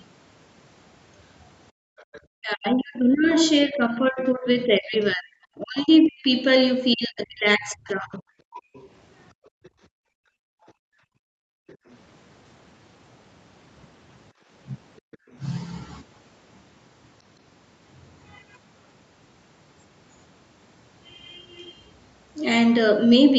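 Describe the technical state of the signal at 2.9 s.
At 2.9 s two faults overlap. The other side's voice is leaking through from 1.98 to 5.07 s, likely because the loudspeaker playback was not fully cancelled at the microphone. It is a faint second voice, roughly 25 dB under the talker. On a spectrogram it appears as weak, unrelated harmonic striations beneath the main speech.

Speech is also suppressed in double talk from 2.3 to 8.64 s. The likely cause is an echo canceller that could not separate the talker from the echo and turned both down. The speech dips and breaks off in pieces, by as much as about 40 dB, for about four seconds in all. On the waveform the envelope shows abrupt notches, and on the spectrogram the energy drops out in gaps.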